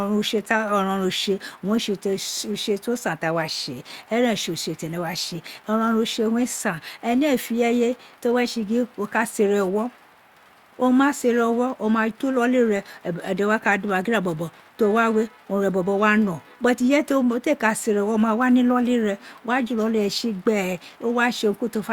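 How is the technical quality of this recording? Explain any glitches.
No technical faults are audible anywhere in this recording.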